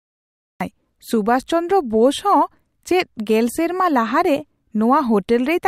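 From 0 to 0.61 s there is digital silence, then speech enters abruptly mid-sound with no attack. This is a cut-off start, caused by capture beginning late.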